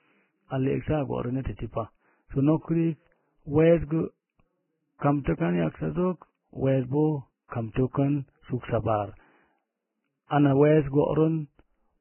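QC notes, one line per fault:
throughout: Vorbis compression, likely the cause of the hissy, grainy speech with nothing above 3 kHz; heavy treble quantisation at what sounds like roughly 10 kbps turns detail into noise.
7.48–7.52 s, 7.74–7.76 s, 10.27–10.31 s: pre-echo, a 24–40 ms hiss before sharp attacks (after "kan yaksazog weesbo", before "ana wees") as block-wide quantisation noise fills the quiet lead-in.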